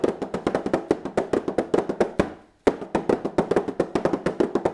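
Nothing stood out on listening to the audio.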